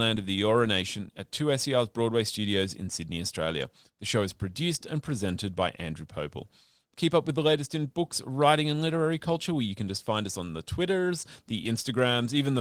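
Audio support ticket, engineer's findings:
Nothing stood out on listening to the speech in this clip, and the Opus voice compression behaves as expected at 20 kbps in hybrid mode.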